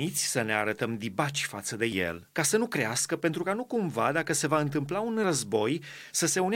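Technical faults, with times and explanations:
No technical faults can be heard in this speech clip.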